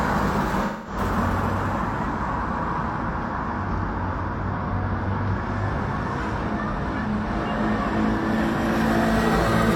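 AAC frame loss with concealment occurs from 0.65 to 0.97 s. About 213 ms of coded audio never reached the decoder, a gap that fits roughly five AAC frames. The decoder covered it by repeating the spectral content of the last good frame with altered phase or rebuilt energy, rather than reproducing the real signal. The result is a smeared, noisy or phasey patch where the sound loses its detail before the clean stream resumes.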